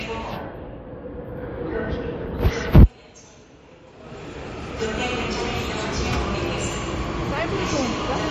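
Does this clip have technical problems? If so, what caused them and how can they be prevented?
Yes. Throughout, the audio has a hard ceiling at 13.6 kHz and a watery, swirly texture where weak detail flickers in and out, with smeared attacks. That's likely MP3 compression starved of bits, consistent with roughly 37 kbps. To prevent it, encode at a higher bitrate or keep a lossless master.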